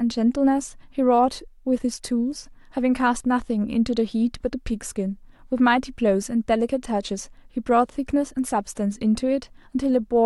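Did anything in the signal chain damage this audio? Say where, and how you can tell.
No, no signal-chain damage heard.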